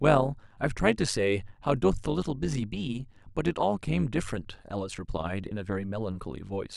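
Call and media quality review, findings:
Overlap-add ripple, entire speech clip. Metallic buzz with extra tones around each note on all speech, level dipping by about 11 dB at a steady rate of around 100 Hz. Probable component: frame-based processing stage (resynthesis or noise suppression). Window overlap does not sum to constant gain, so level swells and sags once per frame. Distinguished from packet loss or jitter: strictly periodic, never drops out, rate fixed regardless of content.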